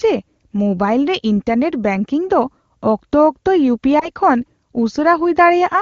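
A radio error corrupted speech data at 3.99 s, which fits a single lost 20 ms frame in this AMR wideband (HD Voice) speech clip. The lost AMR speech frame made the decoder reuse the previous pitch and vocal tract settings, producing a brief dip or warble until 4.10 s. The surrounding speech sounds clean, which points to a high AMR-WB rate.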